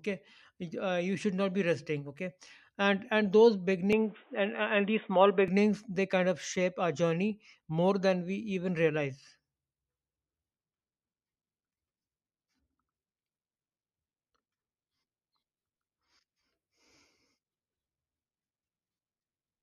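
From 3.93 to 5.48 s the speech abruptly loses everything above 3.8 kHz and turns dull and boxy, with a new background noise about 35 dB below the signal. There is no gap or obvious level jump, which points to a likely input switched to a poorer device.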